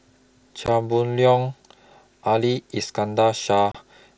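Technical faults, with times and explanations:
0.66 s and 3.72 to 3.75 s, unconcealed Bluetooth headset packet loss: the headset link dropped a couple of packets and then a few more, leaving gaps of about 15 ms and 30 ms. Nothing fills them, so each one's a hard-edged hole in the wideband mSBC speech.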